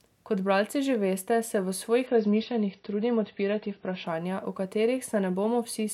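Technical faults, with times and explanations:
2.07–4.07 s: adaptive stream at a lower bitrate. After "že veste se v", everything above 6 kHz suddenly vanishes, with no gap. This fits a switch from 96 to 24 kbit/s AAC.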